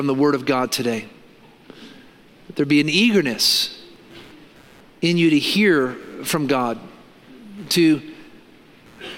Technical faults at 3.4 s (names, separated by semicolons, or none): computer activity noise